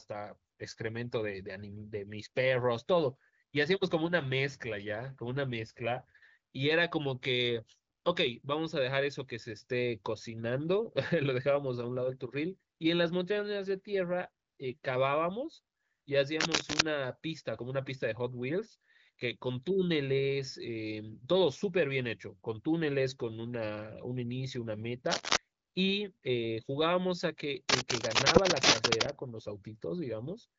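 Three bursts of scratchy, rustling noise sit over the speech, at 16.40 to 16.81 s, 25.06 to 25.37 s, and a longer one from 27.69 to 29.10 s. The first and last are loud, around 10 dB above the speech, and the middle one is a bit softer. That dense, uneven crackle is most likely cable scratch noise from a worn lead or connector being moved. The contact resistance flickers and sprays noise into the signal. Everything tops out near 7 kHz, which fits the AMR wideband (HD Voice) codec.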